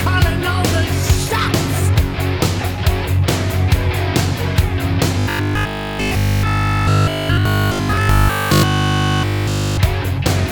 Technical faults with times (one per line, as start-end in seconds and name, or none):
5.19-9.77 robotic sound from repeated short buffers